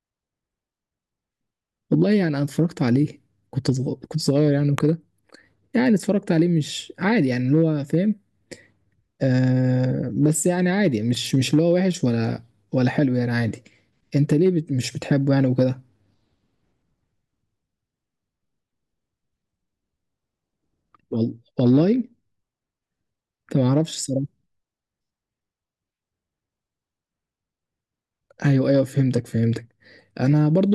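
A sudden voltage step, likely from a plug, switch, static discharge or driver glitch, entered the signal path of this speech recording. It produces a single loud pop from 4.78 to 4.80 s, peaking roughly 15 dB above the speech, which carries on underneath.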